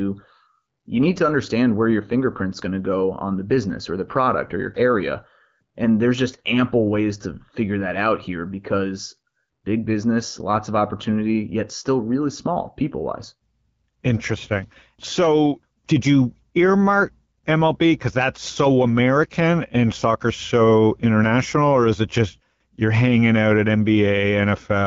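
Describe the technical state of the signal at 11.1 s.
At 11.1 s the speech is intact, with no fault at that moment; it is carried through an AMR wideband (HD Voice) codec at 12.65 kbit/s, which leaves it clear with only light coding damage.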